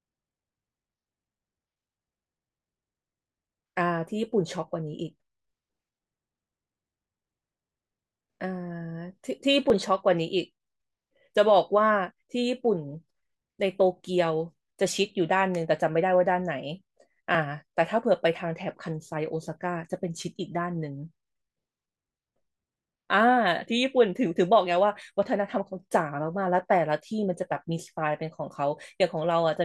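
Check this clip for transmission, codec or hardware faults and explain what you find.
A clock drift buffer slip, with regular clicks roughly every 3.8 s from 2.07 to 28.84 s. This is likely a large mismatch between two device clocks, each time dropping or repeating a small block of samples.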